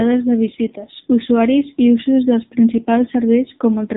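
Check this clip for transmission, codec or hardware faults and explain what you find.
One codec fault runs through the whole clip: AMR narrowband mobile codec compression. The speech has nothing above 3.8 kHz, consistent with 8 kHz sampling and its 4 kHz limit. AMR-NB rebuilds speech from a vocal-tract filter excited by a handful of pulses per 5 ms subframe. Here the damage is heavy, which fits a low mode around 6.7 kbps. Too few pulses make the voice buzzy, synthetic and muffled, with dull, lisping sibilants from start to finish.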